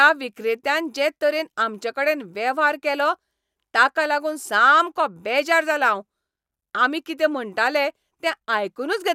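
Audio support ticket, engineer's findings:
No audible fault found in the speech recording. Nothing on listening that points to a problem in capture, processing or playback.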